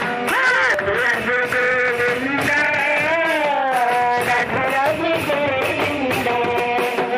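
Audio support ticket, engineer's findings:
Abrupt forward jumps in the sound, no gap: 0.74 s and 6.60 s (about a third of a second skipped each), 2.79 s (about a tenth). Likely dropped buffer (overrun), capture side not reading before hardware overwrote; missing audio spliced straight across.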